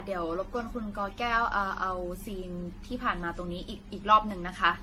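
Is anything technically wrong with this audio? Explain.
Yes, there's generation loss running through the whole speech clip. It sounds swirly and hollow, with smeared consonant onsets and nothing above about 16.6 kHz. That's more damage than one lossy pass would do. It's likely the audio went through something like ten rounds of decoding and re-encoding, and the band limit fits a codec such as AAC-LC at around 64 kbit/s. Each pass quantises on a shifted frame grid, so the noise stacks up.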